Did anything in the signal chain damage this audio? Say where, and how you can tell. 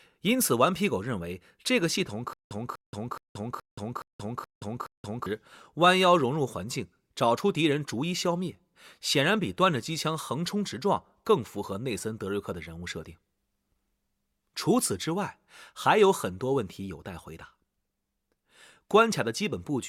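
Yes: stutter with silent gaps, 2.33–5.26 s. A 245 ms burst repeats seven times between 177 ms flat-line gaps, likely a stalled playback buffer.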